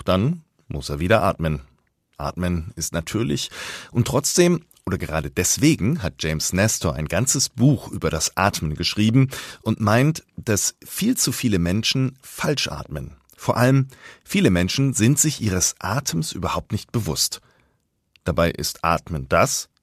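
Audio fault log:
2.29 s, AAC frame loss with concealment: a brief smeared, phasey blip just before "ist natürlich und trotzdem". The decoder filled the gap from the last good spectrum. Its shortness fits one lost frame of about 10 ms, likely from low-delay AAC.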